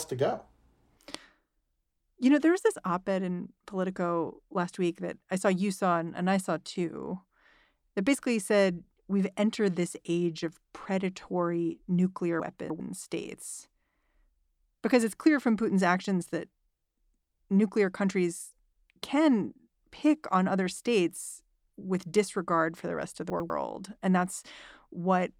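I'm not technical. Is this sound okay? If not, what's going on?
No. Twice the speech jumbles briefly from chunks out of order: at 12.4 to 12.8 s, just after "age of predatory nuclear", and at 23.3 to 23.5 s, after "for the rest of". A tenth-of-a-second slice plays late, three slices behind at 12.4 s and one at 23.3 s, leaving a scrambled moment. Unlike a dropout, nothing is missing; the sound is only reordered.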